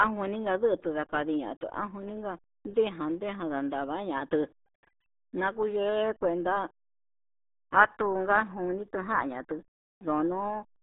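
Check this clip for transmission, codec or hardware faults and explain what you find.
One fault runs through the whole recording: RealAudio 14.4 codec damage. From start to finish, the speech sits in a narrow telephone-like band, roughly 200 Hz to 3.7 kHz, with nothing above 3.8 kHz. The codec discards fine spectral detail to hit a very low data rate, which fits an 8 kbit/s dial-up stream. The damage is heavy. Speech sounds muffled and gargly, with a watery, smeared texture.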